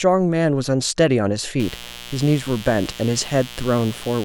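At 1.60 s a mains buzz starts and continues to the end at 4.25 s. Sharp spikes let in by a dimmer, rectifier or missing shield are leaking into the signal, twice every 60 Hz cycle. The result is a steady, raspy buzz, roughly 15 dB under the speech. A spectrogram shows a comb of horizontal lines at multiples of 60 Hz reaching several kHz, and the waveform shows a fine repeating spiky pattern between phrases.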